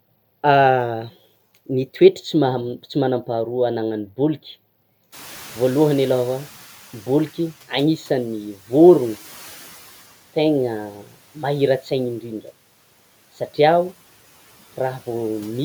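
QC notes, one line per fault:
5.12–7.61 s, noise suppressor catching up: room noise jumps by about 22 dB around 5 s and the suppressor's noise estimate trails behind. The noise first passes with little reduction, then sinks by about 8 dB over 2.49 s. A spectrogram shows a bright broadband floor fading gradually.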